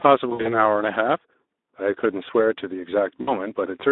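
Throughout, the speech passes through the Speex codec, a CELP coder with too few bits to model the excitation properly. The result is a plainly audible hoarse, grainy roughness. The damage level fits a bitrate around 11 kbps. The line band runs only from about 250 Hz to 3.7 kHz, so the sound is thin at the bottom and dull at the top, with no content above that ceiling.

From 0.29 to 0.6 s, VoIP packet loss concealed by the speech codec sets in. Packets stop arriving, and the decoder fills the gaps by repeating its last pitch and filter state at falling gain. About 120 ms of audio is missing, scattered over roughly 160 ms, with the longest unbroken gap 60 ms. Each hole is smeared into a short, stretched sound that fades away. Because each frame is rebuilt from the one before, the speech stays weak and distorted for a moment after real packets resume.

A second loss spans 3.21 to 3.47 s, covering about 60 ms of missing audio. 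It gives the same brief stretch-and-fade, followed by a weak, distorted recovery.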